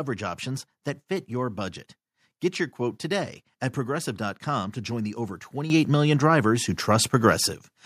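At 5.7 s the microphone volume is stepped up: the input level was raised in a single jump of about 9 dB, so the speech and the background noise get louder together at once. That shared, instant rise sets it apart from a talker moving closer or a gradual gain ramp.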